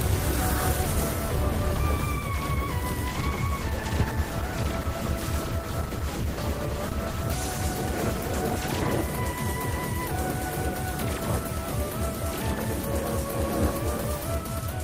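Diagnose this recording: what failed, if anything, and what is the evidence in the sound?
A call bitrate drop, at the codec stage, runs from 3.12 to 9.05 s. The sound turns coarse and watery, and its top end is cut away. This fits the encoder being pushed from around 40 kbps down to 14 kbps. It is unlike packet loss, because the audio degrades evenly without gaps or glitches and then recovers cleanly.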